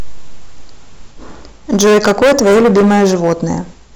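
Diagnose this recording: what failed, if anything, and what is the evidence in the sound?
Hard clipping from overload at a gain or converter stage, driven about 15 dB past full scale from 1.73 s to 3.53 s. The speech turns into harsh fuzz; the waveform shows flat-topped peaks, and the spectrogram shows added harmonics smeared high up the spectrum.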